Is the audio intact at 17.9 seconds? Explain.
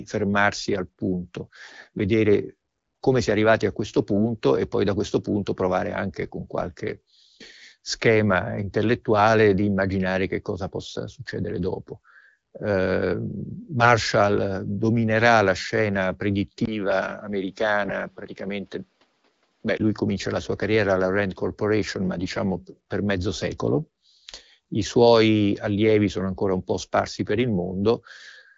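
No. At 17.9 s the sound falls inside a short burst of AMR bit errors, from 17.82 to 17.92 s. Over a weak link, the less protected bits of the AMR frames were flipped while the check on the critical bits still passed, so the decoder accepted damaged data. The excitation pulses land in the wrong places and the fine pitch, gain and spectral values drift. For about 0.1 s, which fits roughly five corrupted frames, the sound turns hoarse and gargly while keeping its rough pitch and level.

This burst sits inside a longer stretch, 16.65 to 19.80 s, where the input switched to a poorer device, likely a different microphone or a headset's call profile. The change comes right after "dominerà la scena", with a 20 ms silence at the switch. From there the sound loses everything above 6.1 kHz and turns duller and boxier, with faint new background noise well below the signal, while the level stays about the same. 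The full band returns at "lui comincia la sua".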